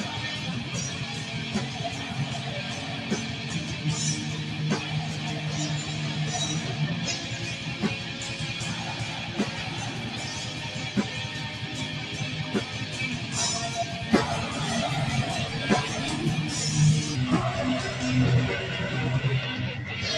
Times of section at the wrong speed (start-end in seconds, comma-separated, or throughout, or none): 17.15-20.17